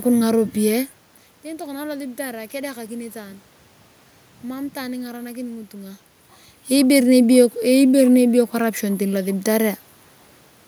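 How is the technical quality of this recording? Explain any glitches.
No technical glitches can be heard in the signal; the room background and the changes in level as the talker moves relative to the microphone around 1 s and 6 s come from the recording situation, not from the system.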